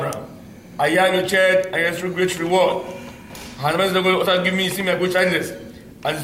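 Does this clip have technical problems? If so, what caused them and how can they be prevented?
No, the signal shows no technical faults, so there is nothing here that needs a cause or a fix.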